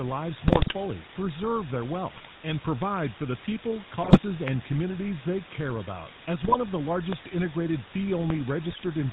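A steady, even hiss sits only a little below the speech for the whole clip. This is low bit depth with dither: the audio is rounded to about 5 bits, and the dither turns that error into constant noise.

The speech also has a buzzy, gravelly roughness and no highs above 4 kHz. That is the GSM full-rate codec, which fits a 13 kbps stream.

From 0.48 to 0.74 s the speech breaks into squawks and gargling. These are GSM bit errors: flipped bits corrupt the decoder's filter, pitch and gain values for those frames. The same garbling returns from 2.14 to 2.34 s and from 4.02 to 4.20 s.

Between 4.48 and 4.50 s a sharp loud pop rises far above the speech, which carries on underneath. It is likely a voltage step from a plug, switch or glitch.

GSM bit errors garble the speech again from 6.44 to 6.57 s.

A second, somewhat quieter loud pop strikes from 7.13 to 7.15 s, another sudden pulse added on top of the speech.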